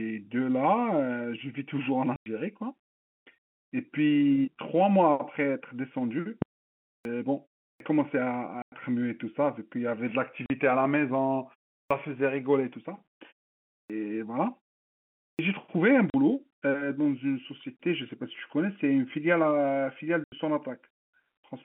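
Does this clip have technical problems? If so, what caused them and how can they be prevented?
Yes. Three kinds of fault can be heard.

Packet loss filled with silence occurs at 2.16 s (100 ms), 8.62 s (100 ms), 10.46 s (40 ms), 16.1 s (40 ms) and 20.24 s (80 ms). Every gap is a multiple of 20 ms, which fits 20 ms packets being dropped and replaced with silence. On a waveform these are flat lines cut sharply into the sound. On a spectrogram they are blank vertical stripes. Using packet loss concealment and a jitter buffer would mask these gaps.

A phantom power thump runs from 6.42 s to 6.63 s, with its main energy dying away in about 47 ms. A supply voltage switched on a live input sent a step through the coupling capacitors. The waveform shows one large low-frequency swing that relaxes back to centre, and the spectrogram shows a dark smear near the bottom of the band. Switching phantom power only while the channel is muted prevents this.

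The clipped start after a pause happens five times: at 6.95 s, 7.70 s, 11.81 s, 13.79 s and 15.29 s. Each follows a pause of 0.31 to 0.76 s and loses roughly 100 ms of onset. The output device likely drops into a sleep state during silence and swallows the start of the sound while it wakes. Onsets jump straight to full amplitude on the waveform, and on the spectrogram the soft leading edge is missing. Keeping the output stream active through pauses avoids this.

The telephone-band G.711 coding and the muted pauses are not faults.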